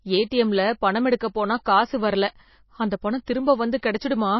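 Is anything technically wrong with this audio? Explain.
Yes, there's plainly audible MP3 compression damage throughout the speech, with nothing above 5.8 kHz. It sounds watery and swirly, likely from an MP3 encoder starved of bits (fitting roughly 24 kbps), dropping weak frequency lines frame to frame and cutting the treble.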